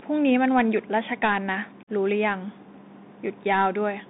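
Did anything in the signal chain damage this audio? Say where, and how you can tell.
Yes. At the codec stage, a Bluetooth CVSD headset codec at 64 kbps limits the audio to about 200 Hz to 3.7 kHz. Its grainy hiss and scratchy sibilants set it apart from clean narrowband filtering.

On the wireless link, unconcealed Bluetooth headset packet loss leaves a hard-edged 45 ms hole from 1.83 to 1.9 s. It is an abrupt dropout, not smoothed concealment, which fits several lost packets.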